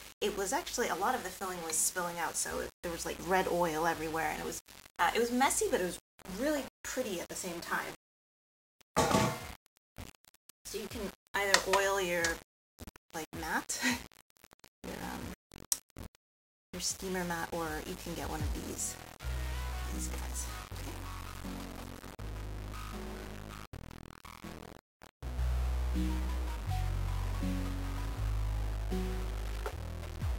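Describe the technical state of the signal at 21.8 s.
At 21.8 s the audio sounds grainy and gritty, a distortion that tracks the signal, as it does throughout the clip. The likely cause is low bit depth without dither: rounding to 7 bits leaves error only roughly 15 dB below the signal.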